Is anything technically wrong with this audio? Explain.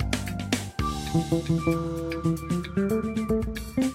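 No, nothing technically wrong stood out on listening to this audio.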